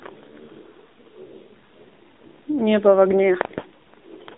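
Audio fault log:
Throughout, AMR narrowband mobile codec: the speech sits in a narrow phone band of roughly 250 Hz to 3.7 kHz, with nothing up top, and the low bit rate, which fits around 7.4 kbps, leaves it plainly buzzy and synthetic as the vocal-tract model struggles to rebuild it.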